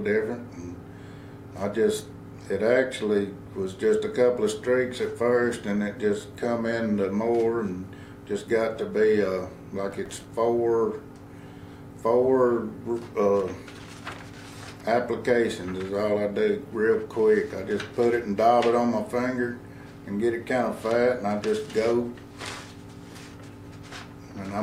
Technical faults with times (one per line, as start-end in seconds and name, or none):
9.91-10.25 processor overload crackle